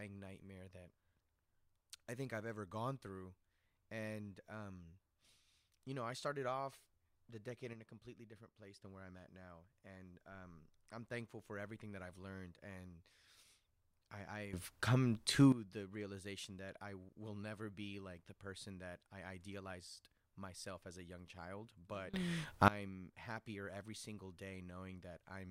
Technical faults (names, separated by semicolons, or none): sudden gain jump